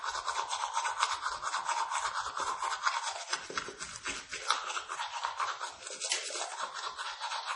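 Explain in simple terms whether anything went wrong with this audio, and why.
Yes, from start to finish the sound is dull and watery, with a swirly, metallic edge and nothing above about 10.5 kHz. This is likely MP3 compression: squeezed too hard, the encoder cut off the treble and let faint details flicker in and out.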